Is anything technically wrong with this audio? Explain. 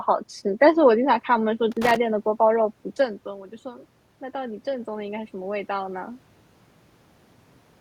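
Yes, there are two technical faults in this speech recording.

From 1.72 to 1.96 s there is an irregular burst of crackle and scratching lasting about a quarter of a second. This is loose connector crackle: a worn or dirty contact in the cable or jack is briefly making and breaking as it shifts. Each interruption chops the signal, and any DC present on the line turns those rapid breaks into small pops, producing the ragged crackling texture.

From 3.62 to 6.08 s the voice and the room's background noise slowly swell together by about 4 dB over roughly two and a half seconds. This is the automatic gain rising. Around 3 s the talker moved away from the microphone, and the level reaching it dropped by about 14 dB. The automatic gain control judged the input too quiet and gradually raised its gain, lifting the room noise along with the speech.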